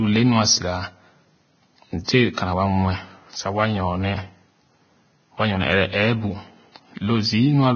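From start to finish the speech sounds hissy and grainy, with a dull top that stops at about 6.6 kHz, roughened vowels and smeared consonant onsets. The likely cause is heavy Vorbis compression at a low rate, consistent with roughly 18 kbps. The encoder has lowered its cut-off and quantised the remaining treble so coarsely that fine detail above the smooth spectral floor has turned into noise of similar energy.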